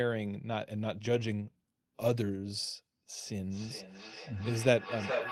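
Feedback echo between two devices affects this speech clip from 3.15 s to the end. The sound returns at a steady interval of roughly 0.4 s, growing thinner and more ringing with each pass, and the loudest repeat reaches about 1 dB below the speech itself. This happens when a second device in the same room replays the call and the first microphone picks it up again. Each echo canceller removes only its own device's playback, so the loop goes unchecked.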